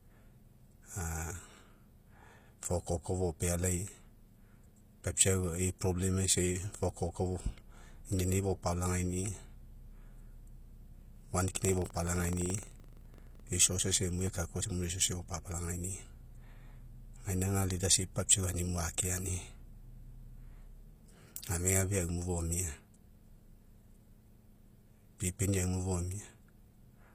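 HE-AAC compression runs throughout the speech. The treble sounds synthetic rather than recorded, with s sounds coming out gritty and metallic. The likely cause is spectral band replication: only the lower spectrum is truly coded, and the top is rebuilt by copying lower bands upward under a coarse envelope, so the upper harmonics never align with the real ones. The damage is plainly audible and points to a low bitrate around 24 kbps.

Buffer tearing runs from 11.52 to 13.51 s. The playback software writing into the ring buffer and the hardware reading from it have drifted until their positions cross within each period. A small sliver of every buffer, a few percent, still holds audio from roughly a tenth of a second earlier, with a hard splice at each edge. The result is a rattling, robotic buzz at 23.4 Hz over the speech, which fits a 2048-sample buffer.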